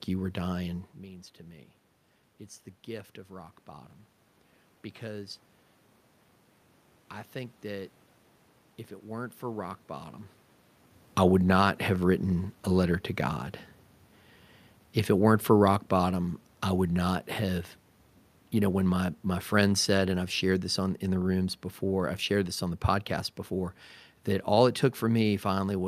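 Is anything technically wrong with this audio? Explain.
Yes. Automatic gain falling runs from 15.12 to 23.16 s, beginning just before "before that all it". The gain control judged the input too loud, or its background noise too strong, and gradually lowered its gain by about 6 dB, so the speech and the room noise behind it sink together. The level changes around 1 s and 10.5 s come from the talker moving relative to the microphone, not from the system.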